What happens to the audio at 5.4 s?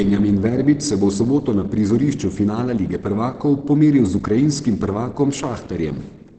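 At 5.4 s the speech is still passing through the low-rate encoding that runs the whole clip, likely Opus compression in its SILK speech mode at a rate that sounds close to 16 kbps. SILK models the voice for wideband transmission instead of coding each frequency band in detail, so nothing reaches above about 8.5 kHz. The result is plainly audible: the speech sounds muffled and hoarse, with its top end cut away.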